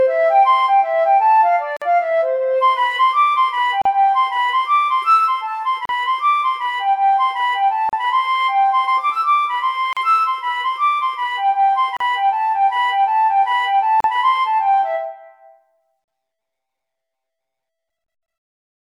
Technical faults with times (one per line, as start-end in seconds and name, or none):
1.77-1.82 gap at a join of encoded pieces
3.82-3.85 gap at a join of encoded pieces
5.85-5.89 gap at a join of encoded pieces
7.89-7.93 gap at a join of encoded pieces
9.93-9.97 gap at a join of encoded pieces
11.97-12.00 gap at a join of encoded pieces
14.00-14.04 gap at a join of encoded pieces
16.04-16.08 gap at a join of encoded pieces